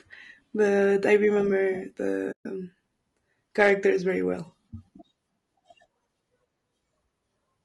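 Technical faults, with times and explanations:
Throughout: low-delay AAC compression. The speech sounds rough and grainy, with noise between harmonics and a dull, synthetic top band. The likely cause is AAC-ELD at around 32 kbps.
2.31 to 2.46 s: AAC frame loss with muting. The sound fades out and back in, leaving a soft 140 ms hole, which fits several zeroed frames.
3.60 to 3.70 s: hard clipping. Peaks overdriven by about 4 dB are cut flat, adding crackle just before "very well".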